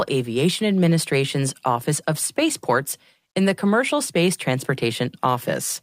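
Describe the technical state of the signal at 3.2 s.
At 3.2 s the speech signal is intact, with no fault present at that moment.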